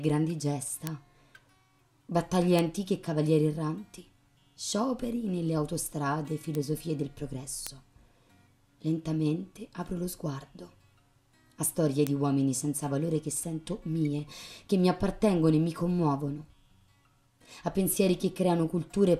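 Five single-sample bit error spikes tick through this audio at 0.87, 2.59, 6.55, 7.67 and 12.07 s, each peaking near about -8 dBFS except the quieter one at 6.55 s, about -14 dBFS. A flipped bit forces one sample to jump by a power of two and snap straight back, giving a broadband tick unrelated to the surrounding sound. Unlike a dropout click, nothing goes missing: the waveform continues unbroken on either side.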